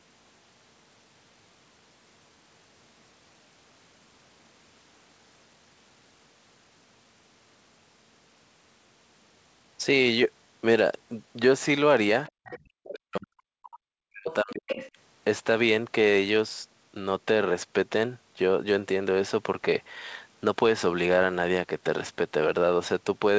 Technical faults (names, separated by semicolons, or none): other side's voice leaking through; background gated by the echo canceller; speech suppressed in double talk